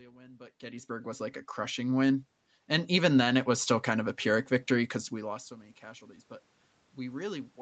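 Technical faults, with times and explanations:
0.59–2.32 s and 2.89–4.08 s, automatic gain rising: the gain control judged the input too quiet and raised it gradually, by about 7 dB and then about 4 dB. The room noise swells with the speech, unlike a talker moving closer.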